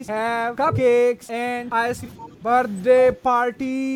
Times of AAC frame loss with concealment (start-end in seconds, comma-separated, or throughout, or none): none